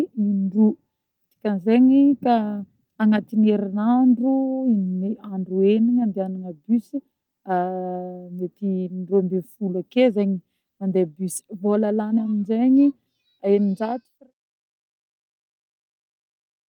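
No technical faults are audible.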